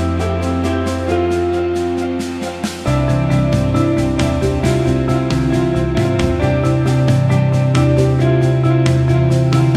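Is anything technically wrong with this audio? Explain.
No, nothing technically wrong stands out in this audio. No working path is listed to comment on, so there is nothing further to describe.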